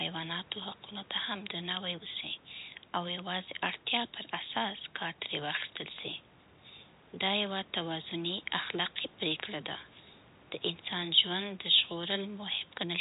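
No technical faults can be heard in this speech recording. It has the narrow sound of a fixed-line call, with G.711 telephone coding leaving nothing above about 4 kHz and the call microphone processing trimming the deepest bass.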